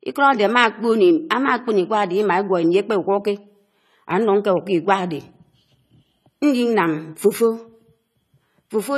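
Running the whole length, the audio was likely squeezed through AAC compression at a low bitrate, with a bit budget too small for the speech. The encoder dropped everything above 14 kHz and quantised the remaining bands coarsely, with a level of damage that fits roughly 32 kbps. The result is plainly audible: the speech sounds dull and smeared, with a warbling, fizzy texture clinging to sibilants and held sounds.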